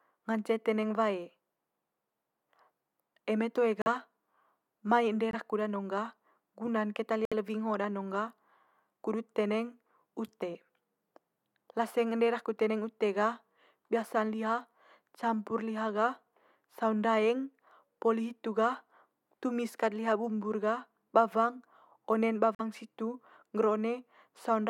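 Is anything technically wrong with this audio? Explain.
Yes, four short stretches of corrupt frame muted. At 3.82–3.88 s, 5.31–5.38 s, 7.25–7.33 s and 22.55–22.61 s, damaged compressed frames were rejected by the decoder and replaced with silence. Each gap cuts into the speech abruptly and lasts 60 to 80 ms, a few frame lengths, while timing stays intact.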